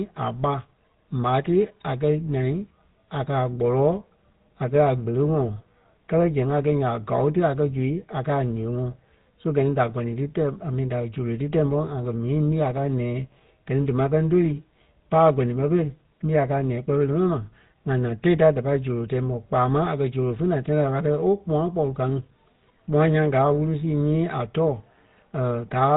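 Speech with GSM full-rate codec damage throughout: bandwidth stops near 4 kHz, and sparse pulse excitation adds a plainly buzzy, gravelly roughness, consistent with 13 kbps coding.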